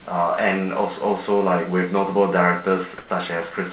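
From 2.98 to 3.1 s, about 120 ms, the room tone turns into a flat, featureless hiss at the same level, sitting roughly 22 dB under the loud parts. That's comfort noise in place of the background, likely from the sender pausing transmission and the receiver filling the gap with synthetic noise, all within the phone-band audio that stops at 4 kHz.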